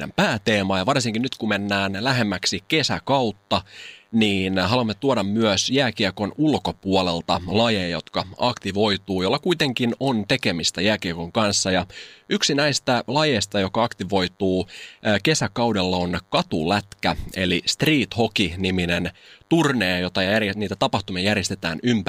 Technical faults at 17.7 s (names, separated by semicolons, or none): DECT cordless phone buzz